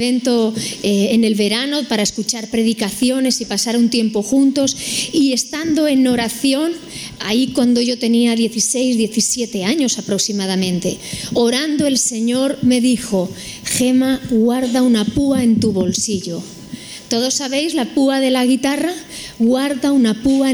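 Gain pumping runs through the whole clip. The level never settles. Each loud sound is pulled down hard. The swing is large, about 15 dB. Loud and soft parts sit unnaturally close together. The result sounds squashed and breathing. The likely cause is input gain set far too high, with a fast limiter or compressor clamping down on every peak and releasing quickly afterwards.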